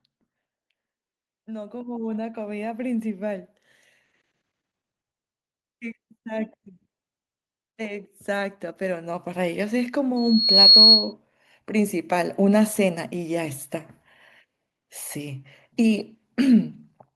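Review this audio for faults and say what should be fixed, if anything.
Automatic gain rising shows up twice: from 1.46 to 3.5 s the level climbs by about 10 dB, and again from 7.76 to 9.61 s by about 6 dB. The speech and the room noise swell together, so it's the AGC deciding the input was too quiet. Turning AGC off or capping its maximum gain would keep the level steady.

There's a loudspeaker feedback squeal from 10.16 to 11.13 s. A single 4.3 kHz tone builds over about half a second until it sits well above the speech, because the mic is hearing its own speaker output and that frequency keeps looping back stronger. Using headphones, moving the mic away from the speaker, or enabling echo cancellation would stop it.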